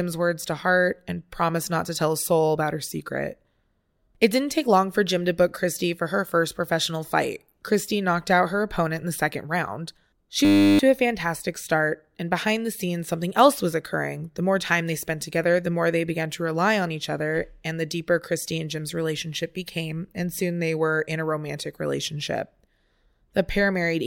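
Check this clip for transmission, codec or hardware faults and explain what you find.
One fault turns up in this speech clip, a single hardware-side freeze.

System hang loop, 10.45 to 10.79 s: the driver stalled while the sound hardware kept replaying the same 10 ms slice of its ring buffer, 34 times over. That repetition at 100 Hz becomes a steady buzz replacing about a third of a second of speech.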